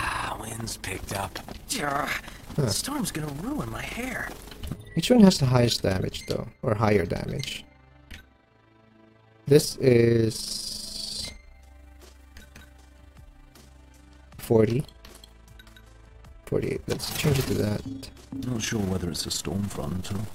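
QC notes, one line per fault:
Throughout, overlap-add ripple: frames rejoin with uneven overlap gain, so level pumps about 6 dB at around 30 Hz, giving a rough flutter.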